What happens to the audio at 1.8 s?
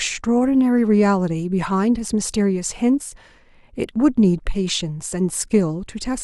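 Nothing goes wrong at 1.8 s: the speech there plays through intact, with no dropout, click, distortion or other fault.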